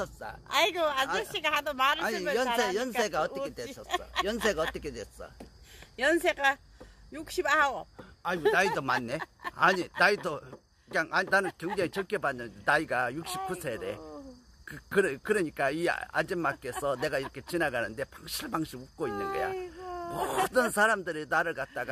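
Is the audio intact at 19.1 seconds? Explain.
Yes, the audio at 19.1 seconds is intact, with no dropout, click, distortion or other fault at that moment.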